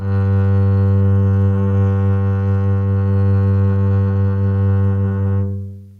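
No technical faults can be heard anywhere in the music; the signal holds steady throughout, with no interruptions, level problems or added disturbances.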